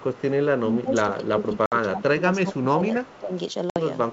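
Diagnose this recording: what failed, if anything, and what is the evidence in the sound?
Echo leak, 0.0 to 0.22 s and 3.04 to 3.19 s, call processing stage. A faint delayed copy of the speech trails the direct sound by 246 ms, about 25 dB below it. It most likely comes from a far end on a loudspeaker whose echo canceller left a residue of what its microphone picked up and sent it back down the line. The fixed 246 ms lag in both places points to one acoustic path.

Speech suppressed in double talk, 0.62 to 2.26 s and 2.43 to 3.33 s, call processing stage. The talker's level sinks in patches, by roughly 15 dB at the deepest, over about one and a half seconds in the first span and about half a second in the second. This is the likely sign of an echo canceller that could not separate the local talker from loudspeaker echo while both sides spoke. It attenuated everything, so the voice ducks and thins in pieces.

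Packet loss on an ADPCM call, 1.66 to 1.73 s and 3.70 to 3.79 s, network stage with effects in the codec. Each span contains a hard-edged 60 ms hole. That fits about three consecutive 20 ms packets replaced by silence. On the wideband G.722 path, whose upper band stays clear to 7 kHz with only faint hiss, the resumed speech comes back slightly distorted. The decoder's adaptive predictor and step size have drifted from the sender's. They then need some tens of milliseconds to re-converge.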